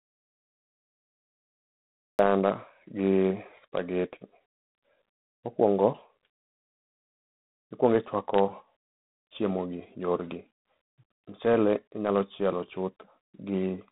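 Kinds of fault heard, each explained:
G.726 ADPCM: The whole clip carries the sound of adaptive differential PCM, which codes each sample as a few bits of difference from a running prediction rather than the full value. The harsh, rasping hiss riding on the speech and rising and falling with its level fits the 24 kbit/s rate, with too few bits to track the waveform cleanly. The band runs roughly 150 Hz to 3.7 kHz, and nothing passes above 3.9 kHz.
Audio dropout to silence: The clip opens in silence with no room tone at all, already under way when the audio begins, and speech only arrives at 2.19 s. A gap this clean means the recording chain kept writing silence while no signal reached it. The likely cause is a momentary loss of input, such as a disconnected source, a failed link or an unintended mute, and whatever was present during that stretch is not recoverable.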